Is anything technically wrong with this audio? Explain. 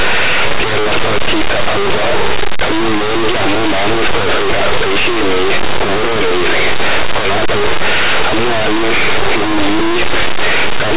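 Yes. Throughout the speech, the audio is linear audio read as companded: plain linear 8-bit samples are decoded as if they were mu-law codes. Small values just to one side of zero map to the largest mu-law outputs while their mirror values stay tiny, so the waveform is scrambled into very loud, harsh distortion. Correctly read 8-bit audio would give only a faint grainy hiss, about 50 dB down, behind intact speech.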